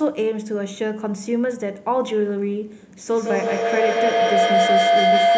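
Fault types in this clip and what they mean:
Feedback howl: Sound from a loudspeaker re-enters a microphone in the same room, gaining level each trip. From 3.05 s a tone near 700 Hz builds, the loop repeating roughly every 150 ms. It peaks about 5 dB above the speech and runs to the end.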